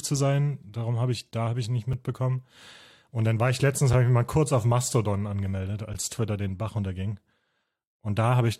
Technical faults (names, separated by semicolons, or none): gap between stream segments